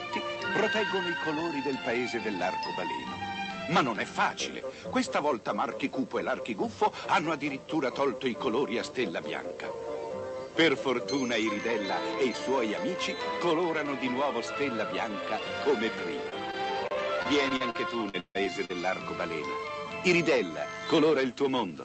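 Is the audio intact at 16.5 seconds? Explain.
No. From 16.52 to 16.55 s there is a short concealed packet loss: about 20 ms of sound never arrived, and the receiver bridged it by extending the preceding sound before blending back. Unlike a dropout, there's no silent gap, only a brief smear.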